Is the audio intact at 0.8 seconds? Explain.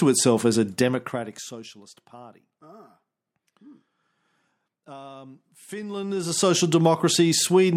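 No. At 0.8 s you're inside a patch of zipper noise running from 0.72 to 1.74 s, just after "itself as a". The level falls by roughly 25 dB in unsmoothed 2 dB jumps, about 15 a second, and each jump clicks, giving a ticking buzz over the fade.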